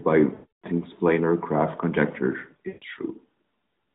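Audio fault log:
0.34–0.67 s, lost AMR speech frames: a run of about 300 ms of failed frames; the decoder repeats the last good pitch and spectral settings at falling gain, so the sound smears, then fades to silence before recovering weakly.
2.68–2.84 s, lost AMR speech frames: a shorter run of about 140 ms; concealment stretches the preceding sound briefly and it decays, leaving a short drawn-out dip in the narrowband audio.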